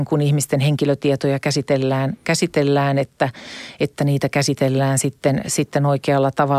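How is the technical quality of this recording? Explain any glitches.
No glitches or technical faults can be heard here.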